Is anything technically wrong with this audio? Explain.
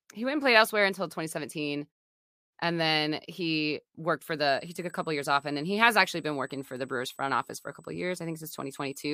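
Yes, there's USB whine starting at about 4.48 s, right after "then he worked for", and running to the end. It's a steady 8 kHz tone, well below the speech, from the bus's 125-microsecond microframes leaking current noise into the audio through power or ground.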